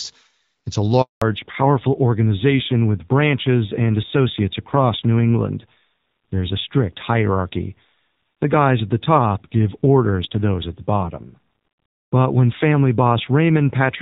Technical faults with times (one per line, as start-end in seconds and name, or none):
1.02-1.22 handover gap
1.22-14.01 fallback to narrowband